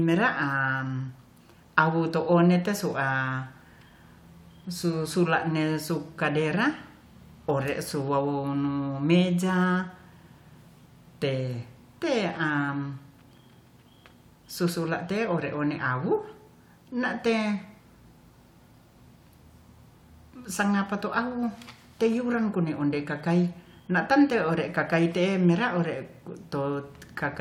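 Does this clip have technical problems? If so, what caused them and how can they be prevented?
No, there are no technical problems to report here.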